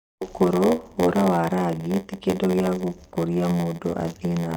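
A steady buzz at about 86 Hz runs through this speech from start to finish, and the talking drags slightly, at 0.938 times normal speed. This is a block size mismatch (padded): one stage hands over shorter blocks than the next reads, which fits 512-sample reads, and the shortfall in each block is filled with silence. Those regular gaps produce the buzz and stretch the timing.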